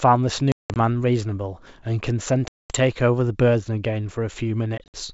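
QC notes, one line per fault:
0.52–0.77 s, packet loss on an ADPCM call: about 200 ms dropped as scattered holes over 240 ms, the longest 180 ms, each filled with hard-edged silence; on return the decoder's predictor and step size disagree with the sender's, so speech comes back slightly distorted before settling.
2.48–2.77 s, packet loss on an ADPCM call: one 220 ms gap, about ten packets, then a brief distorted restart of the G.722 wideband sound.
4.78–5.01 s, packet loss on an ADPCM call: 100 ms lost across 160 ms in runs up to 60 ms, each re-entry slightly distorted before settling.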